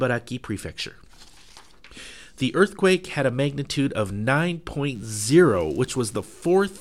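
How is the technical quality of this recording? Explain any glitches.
One fault stands out: from 4.95 s to the end, a faint, thin, steady buzz sits well beneath the sound. This is DECT cordless phone buzz: a nearby handset or base transmits a radio burst every 10 ms, which the audio circuitry rectifies into a 100 Hz tone rich in harmonics.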